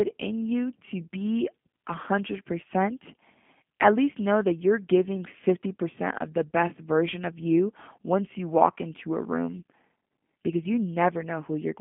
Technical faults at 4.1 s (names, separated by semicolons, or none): G.729 codec